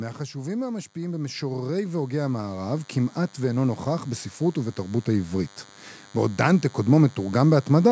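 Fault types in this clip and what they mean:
DECT cordless phone buzz: a thin, steady 100 Hz buzz rich in harmonics runs throughout, well below the speech, from a nearby DECT unit's radio bursts being rectified.
Automatic gain rising: speech and background swell together by 14 dB between 0.93 and 5.59 s, as the automatic gain control slowly raises gain on quiet input.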